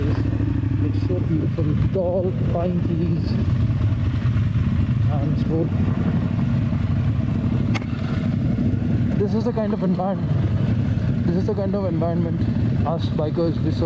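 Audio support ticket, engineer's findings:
Gain pumping, throughout: gain swells in gaps, ducks under loud sounds by about 10 dB. Likely input gain set too high, fast limiter pulling level down on each peak; dynamics squashed.

Skip ahead, 5.50 s: playback jumps forward, roughly 0.4 s of audio missing, joined directly with no fill. Stretch dropped in transit or by jitter buffer while later audio waited, cutting delay.

Jitter buffer speed-up, 6.94 to 7.33 s: audio runs about 8% fast at unchanged pitch, sounds hurried. Buffer trimmed short pitch-period chunks repeatedly, removing around 40 ms of excess delay.

Nothing above 8 kHz, consistent with a G.722 call path at 64 kbps.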